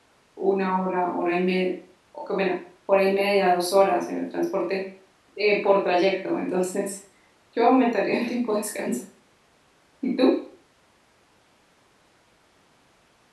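A recording of speech, with nothing technically wrong to report. No fault can be heard anywhere in the clip.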